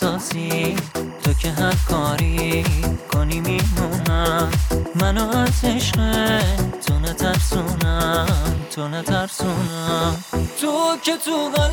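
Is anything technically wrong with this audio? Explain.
Yes. Timecode bleed runs throughout: a 24 frames-per-second linear timecode signal leaks in, about 25 dB below the audio, toggling near 1 and 2 kHz as a steady chirping warble.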